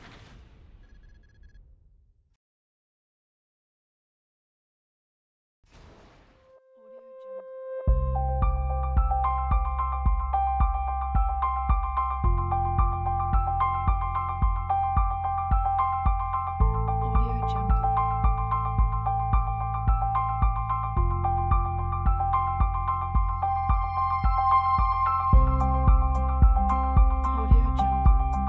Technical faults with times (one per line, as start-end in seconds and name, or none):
none